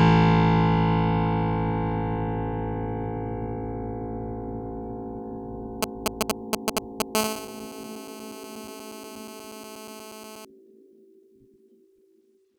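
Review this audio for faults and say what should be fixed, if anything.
A 2G phone nearby, signalling before a call, had its radio bursts rectified by the audio circuit, producing GSM signalling bursts from 5.83 to 7.02 s: galloping ticks and short 217 Hz buzzes, louder than the music.

During the call that followed, continuous 217 Hz transmission bursts were rectified, producing GSM phone buzz from 7.15 to 10.45 s: a steady, raspy buzz with many harmonics, about 9 dB below the music.

Keeping phones away from the recording chain, or switching them to flight mode, and using shielded, RF-filtered cables and inputs would prevent both faults.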